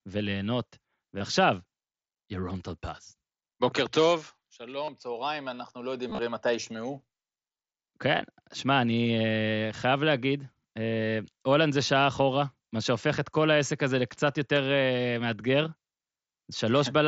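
Speech over a Bluetooth headset link, with concealed Bluetooth headset packet loss at 1.18–1.21, 4.84–4.88, 6.08–6.19, 7.53–7.55 and 14.55 s. The receiver fills lost packets by repeating recent waveform, producing brief buzzy holds. At 6.1 s the losses scatter across about 105 ms.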